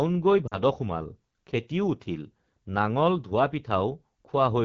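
Throughout, the speech carries the rough, raspy texture of the AMR wideband (HD Voice) codec running near its bottom rate. The coarse vocal tract and pulse modelling is plainly audible, which fits roughly 8.85 kbit/s, with the top band above 6.4 kHz reduced to shaped noise.

From 0.48 to 0.57 s, lost AMR speech frames cause the sound to drop to near silence. The decoder repeats the previous pitch and vocal tract settings with falling gain, which points to about two dropped frames. The voice then returns weak or rough for a moment on "সোমাল খেতিও উঠিল নাঙল".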